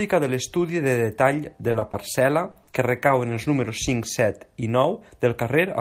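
Short concealed packet loss hits three times in quick succession, at 1.71 to 1.76 s, 1.79 to 1.84 s and 1.91 to 1.96 s. Each time about 20 ms of audio arrived too late, and the receiver extended the preceding sound to bridge it, leaving a brief smeared wobble before blending back.

Lost packets rebuilt from error correction sit inside each of those spots, at 1.73 to 1.75 s, 1.81 to 1.83 s and 1.93 to 1.95 s. There, a 20 ms stretch was replaced by a low-bitrate copy carried in the following packet, so nothing drops out, but those moments sound rougher and noisier.

Repeated packet loss, the robotic kind, runs from 2.51 to 3.11 s. Four gaps, the longest 40 ms, total about 120 ms, a fifth of that stretch, each patched by continuing the last sound. Part was rebuilt from error-correction copies. The result is choppy, with fragments missing.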